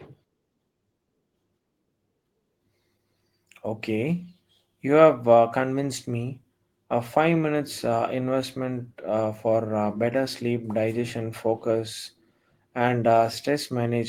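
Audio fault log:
No faults detected in recording.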